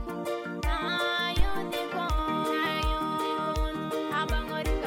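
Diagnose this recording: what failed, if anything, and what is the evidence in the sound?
A phantom power thump sits at 1.39 to 1.73 s in the analogue input stage: a deep low-frequency bump peaking at about -13 dBFS and dying away over roughly 75 ms. Switching the supply on or off on a live input sent a voltage step through the coupling capacitors.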